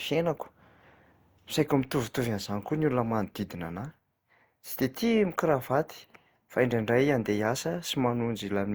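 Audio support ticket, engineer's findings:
Likely generation loss: speech repeatedly re-encoded through Opus at 64 kbit/s, around five passes, each requantising on a shifted frame grid. Throughout: swirly, hollow, smeared timbre; blurred attacks.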